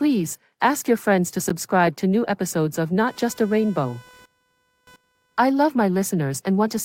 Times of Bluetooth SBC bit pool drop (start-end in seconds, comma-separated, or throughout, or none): none